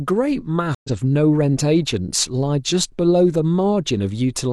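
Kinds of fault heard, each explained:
Stream reconnect: the link dropped around 0.75 s, leaving about 95 ms of flat waveform, then a fresh decoder picks up roughly a tenth of a second later, with a clean spectrogram gap.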